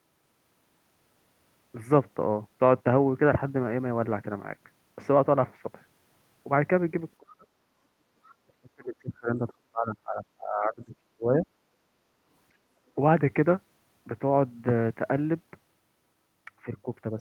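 At 7.19 s the speech drops sharply, by around 30 dB, and stays low to 7.48 s. This is likely speech suppressed in double talk: with both ends active, the echo canceller treated the local talker as echo and attenuated the microphone. The same fault returns at length from 8.46 to 11.46 s, where about three seconds of speech are held well down, by up to roughly 30 dB.

Between those two events, from 7.76 to 8.16 s, the room background dips by about 6 dB and then recovers. This is background gated by the echo canceller, which clamped the microphone while the loudspeaker was active. It happens again from 11.73 to 12.21 s, deeper at about 8 dB.

From 8.26 to 8.35 s a brief, faint scrap of a second voice is audible, far below the talker. This is the other side's voice leaking through, likely loudspeaker output that the canceller left in the microphone signal.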